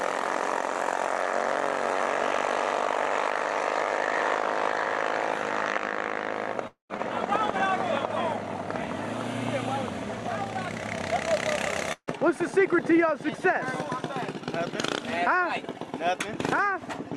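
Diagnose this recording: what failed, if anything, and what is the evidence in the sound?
Two gaps break the sound, at 6.67 to 6.91 s and at 11.92 to 12.09 s. Each begins as a fading buzzy continuation of the last sound and then goes silent for about 130 ms and 70 ms. The audio resumes with roughly 220 ms and 160 ms missing. The likely cause is a long network dropout: the receiver concealed the lost packets, then gave up. A spectrogram shows smeared, decaying harmonics, a blank band, and then an abrupt restart.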